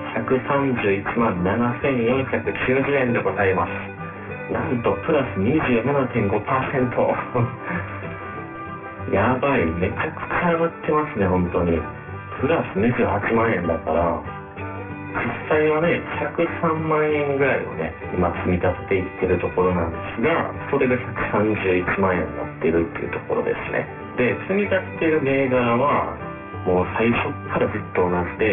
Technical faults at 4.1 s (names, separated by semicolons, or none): aliasing